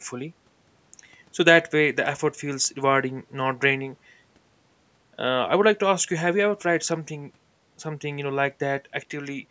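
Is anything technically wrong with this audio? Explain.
No, nothing in this speech clip points to a technical fault. It has passed through ordinary call microphone processing, which trims away the deepest bass and leaves nothing above about 8 kHz, exactly as that path is meant to behave.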